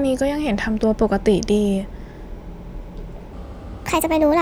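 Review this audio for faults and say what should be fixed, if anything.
From 3.33 s to the end at 4.41 s, the speech suddenly sounds hurried and raised in pitch, lifted by about five semitones. This is a section at the wrong speed: the final stretch plays at 1.38 times its recorded rate, so pitch and tempo rise together. The likely cause is that this portion was fitted to a mismatched clock during editing or playback. To prevent it, confirm that every segment shares the project's sample rate and clock before joining or exporting.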